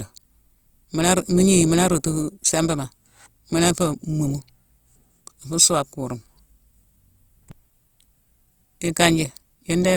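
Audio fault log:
throughout, Opus compression: full-bandwidth speech turns grainy and rough, likely from Opus music-mode coding near 24 kbps filling bit-starved bands with noise.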